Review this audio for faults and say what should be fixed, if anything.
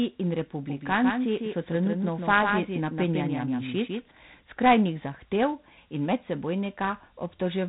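The speech carries 4-bit ADPCM compression throughout. Each sample is coded as a coarse 4-bit step from a prediction, so the quantisation error becomes a gritty hiss that rises and falls with the voice, and sharp onsets smear where the step size lags. Nothing remains above 3.9 kHz, which fits a low-rate 32 kbps stream and explains the dull top end. On a spectrogram the band stops flat at 3.9 kHz, with a haze of noise filling the spectrum beneath the louder syllables. To prevent it, record or export to linear PCM or a modern codec at a full sample rate.

A doubled audio track runs from 0.67 s to 4.11 s. A full-band copy of the speech trails the original by about 150 ms and sits roughly 5 dB lower. It has no reverberant tail or room colouring, and it switches on and off abruptly at those two points. The likely cause is a second capture path or an edit that left two offset copies overlapping. 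On a waveform, each syllable shows a smaller repeat about 150 ms later. On a spectrogram, every formant pattern appears twice, shifted sideways, and the second image starts and ends at hard vertical edges. To prevent it, route each source through a single capture path and remove any duplicate clip before mixing.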